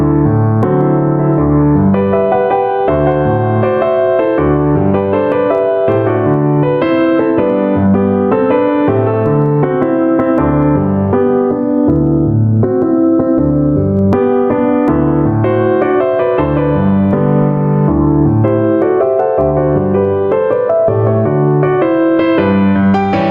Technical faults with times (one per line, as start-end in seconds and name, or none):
0.00-23.30 gain pumping